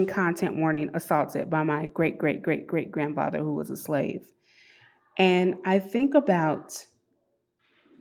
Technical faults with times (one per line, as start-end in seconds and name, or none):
0.73-0.79 short concealed packet loss
1.85-1.91 short concealed packet loss
5.97-6.01 short concealed packet loss